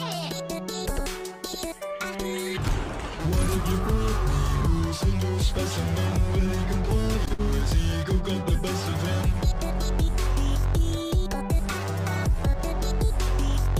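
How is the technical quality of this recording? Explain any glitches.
There is one glitch. At 7.34 to 7.41 s, a short stall from a late packet holds the sound for about 51 ms, with a slight buzz or dip. Nothing is lost; playback resumes where it paused.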